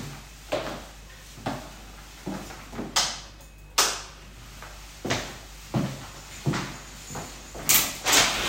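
A steady low drone sits under these everyday sounds from start to finish, a fixed tone at 50 Hz with some low harmonics, running only around 20 dB below the wanted audio. This is mains hum: the 50 Hz power line has leaked into the signal path, most plausibly through a ground loop between connected equipment or from a transformer close to the cabling.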